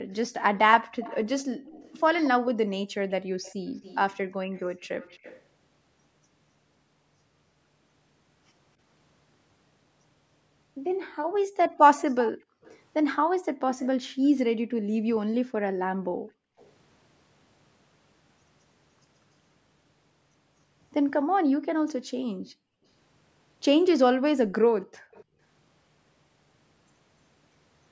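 From 0.0 to 1.74 s the room background is gated by the echo canceller: while the far-end loudspeaker plays, the canceller pulls the microphone down by up to about 36 dB, so the ambience drops out for brief moments totalling roughly a tenth of a second. Overlapping this, from 0.11 to 5.42 s, a faint delayed copy of the speech trails 234 ms behind at about 20 dB below it. This is an echo leak, likely from residual loudspeaker pickup that the canceller failed to subtract. Between 11.09 and 16.58 s the gating returns harder, with dips of up to about 40 dB adding up to around 2 s of missing background. From 11.97 to 16.66 s the echo comes back more strongly, 292 ms late and about 15 dB down. From 21.24 to 25.39 s the background is gated again, by up to about 39 dB for roughly a second in total. Inside that stretch, at 25.12 to 25.24 s, a short scrap of echo appears at the same 292 ms delay, about 30 dB below the speech. 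The call microphone processing leaves nothing above 8 kHz.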